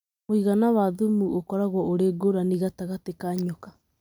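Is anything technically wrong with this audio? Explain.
No, nothing technically wrong can be heard anywhere in this speech recording.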